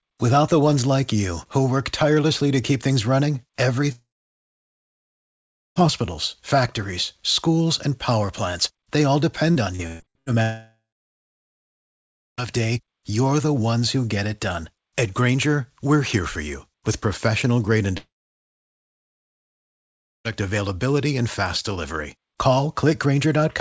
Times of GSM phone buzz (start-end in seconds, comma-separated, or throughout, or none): none